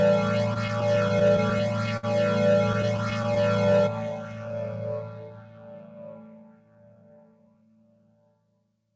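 From 0.54 to 2.05 s the sound drags and catches in a run of repeated stalls (stutter), a dozen brief holds of up to 61 ms, then again more lightly from 2.73 to 3.38 s with six tiny hitches of about 10 ms. Packets arrived late, the receiver's jitter buffer ran dry each time, and the last sound was stretched to fill the wait, so nothing is lost but the flow is broken.

Between 3.33 and 3.82 s the sound runs slightly slow at unchanged pitch, about 92% speed, drawn out by roughly 49 ms. This is a jitter buffer slow-down, in which the receiver repeated short periods of the signal to rebuild its reserve after the stalls.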